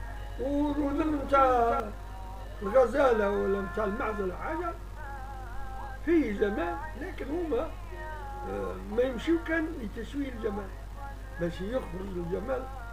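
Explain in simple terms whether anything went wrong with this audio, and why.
From the very start until 1.8 s there is a doubled audio track: a second, noticeably quieter copy of the same sound trails the original by roughly 0.4 seconds, then cuts off abruptly. The likely cause is the signal being captured twice through a slower path.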